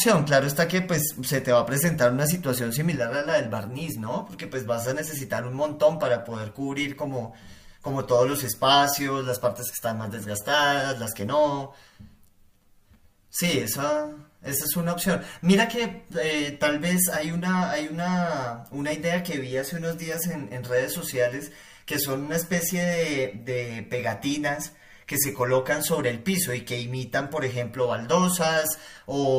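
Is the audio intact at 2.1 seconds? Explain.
Yes, the audio is intact at 2.1 seconds, with no fault audible at that moment.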